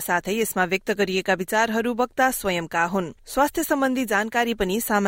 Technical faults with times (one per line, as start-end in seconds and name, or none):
none